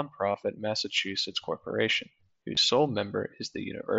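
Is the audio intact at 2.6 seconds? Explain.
No. At 2.55 s there is concealed Bluetooth headset packet loss: about 15 ms of audio went missing between headset and phone, and the receiver patched it by repeating a closely matching piece of the preceding waveform. The short repair sounds like a brief buzzy tone held at full level, with a faint warble where the real signal resumes.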